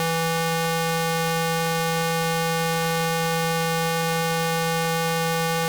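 From start to finish the music carries a harsh, buzzy distortion that rides on every sound, consistent with a stuck bit, likely a single converter or data line held at one value. About half the samples jump by a fixed step of around -10 dBFS, so quiet passages fill with coarse noise. On a waveform the trace shows abrupt offset jumps; a spectrogram shows dense broadband hash spread across all frequencies, present for the whole clip.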